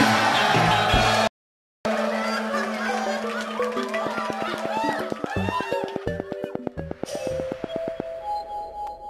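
The audio has a digital broadcast dropout from 1.27 to 1.86 s: it goes silent for about 0.58 s and resumes further along, as a receiver does when frames fail their checks. That gap fits roughly two dozen lost frames. Unlike a skip or stutter, nothing repeats and the missing material never returns. From 4.07 to 8.01 s a train of clicks ticks at a steady 8.4 per second, around thirty alike pulses standing about 15 dB above the sound and heard in pauses too, likely from interference by nearby equipment. Their near-identical shape and even spacing set them apart from random crackle.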